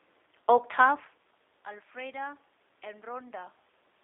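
G.729 codec damage runs throughout: the sound is confined to roughly 300 Hz to 3.7 kHz, and the speech is plainly rough and synthetic, rebuilt from a vocal-tract filter, pitch predictor and sparse pulses, which fits an 8 kbit/s G.729A coder.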